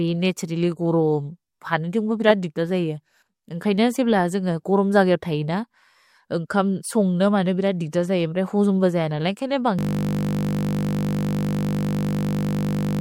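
At 7.91 s, a short hiss arrives just ahead of a sharp onset in the speech, and the onset itself sounds softened. This is pre-echo. The codec spread its quantisation noise across the whole transform block, so noise sized for the loud attack also filled the quiet moment before it, rising about 12 dB over roughly 16 ms. The long block points to a codec that never switched to short blocks. Unlike an ordinary echo or reverb tail, the smear comes before the attack rather than after it.

From 9.79 s to the end, the audio collapses into a steady buzz at 50 Hz. This is a system hang loop: the system froze while the sound hardware kept replaying the same 20 ms of its ring buffer, well over a hundred times in a row. Because the loop is so short, it fuses into a pitched tone instead of a machine-gun stutter. It is not mains hum, because it replaces the speech entirely, and every cycle is an exact copy of the same fragment.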